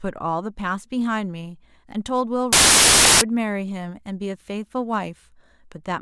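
From 2.53 to 3.21 s the speech gives way to a burst of loud, harsh broadband noise. These are samples built from the wrong bytes: the reader misassembles each sample, so the rapidly changing low-order bits land in the high-order position and swamp the signal.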